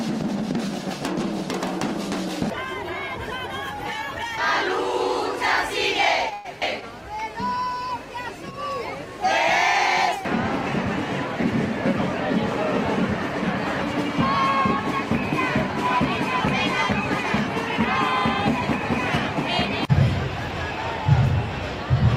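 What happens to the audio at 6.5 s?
Packets were likely held up in transit, letting the jitter buffer run dry: a call audio freeze from 6.33 to 6.47 s. The receiver stretches the last sound into a fading buzz for about 112 ms, then resumes where it stopped, nothing lost, everything after landing about 112 ms late.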